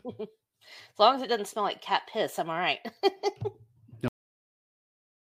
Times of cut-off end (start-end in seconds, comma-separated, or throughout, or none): 4.08-5.38